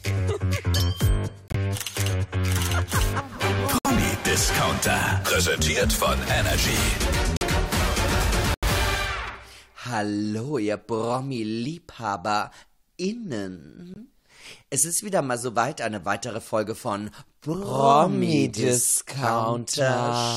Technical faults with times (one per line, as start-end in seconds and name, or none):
1.48-1.55 corrupt frame muted
3.78-3.86 corrupt frame muted
7.37-7.43 corrupt frame muted
8.54-8.64 corrupt frame muted
13.94-13.98 corrupt frame muted